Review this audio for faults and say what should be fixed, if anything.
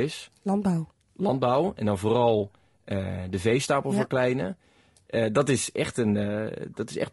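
Low-delay AAC compression runs throughout the speech: it sounds rough and grainy, with noise smeared between harmonics and a thin, synthetic top band, likely from a low-bitrate codec such as AAC-ELD near 32 kbps. A spectrogram shows blurred harmonics and patchy upper bands. Encode at a higher bitrate or use a codec with longer frames.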